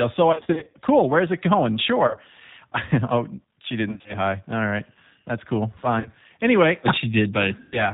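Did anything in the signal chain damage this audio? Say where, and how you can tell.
Yes. At the codec stage, the entire clip went through G.729 at 8 kbit/s. Nothing above 4 kHz survives, and because the speech is rebuilt from a vocal-tract filter, a pitch predictor and a few pulses per subframe, it sounds plainly rough and synthetic throughout.

On the network side, packets were dropped and the decoder covered the gaps. This VoIP packet loss concealed by the speech codec occurs at 0.32–0.75 s (260 ms lost, scattered, with runs up to 40 ms), 2.07–2.17 s (70 ms), 3.89–4.16 s (130 ms), 5.99–6.09 s (50 ms) and 7.60–7.83 s (120 ms). Each gap becomes a fading smear, and the sound stays weak until the decoder's state catches up.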